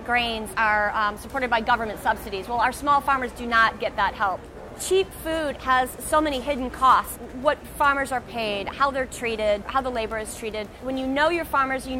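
No technical faults are audible anywhere in the clip.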